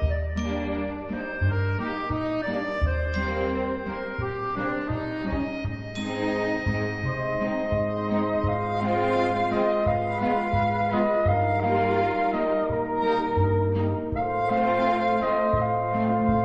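No technical faults can be heard anywhere in the clip. Nothing interrupts or disturbs the audio at any point.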